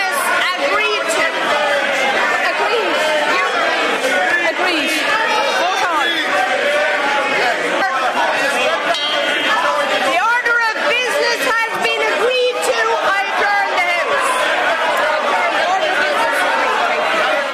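No technical faults can be heard anywhere in this clip. Nothing in the audio stands out as a defect at any point.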